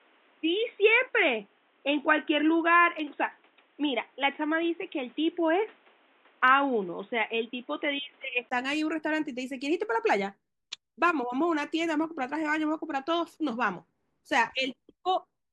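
From 0.0 to 8.51 s the speech is dull and boxy, with nothing above 3.8 kHz, and a faint new noise floor sits far below it. This points to an input switched to a poorer device, likely. A spectrogram shows a hard ceiling that lifts at 8.51 s after a brief gap of about 20 ms, with no obvious change in waveform level.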